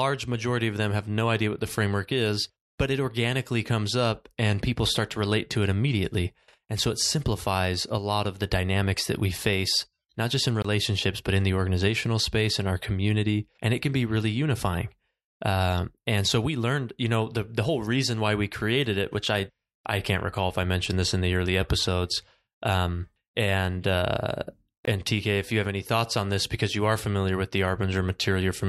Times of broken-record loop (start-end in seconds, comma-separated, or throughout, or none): none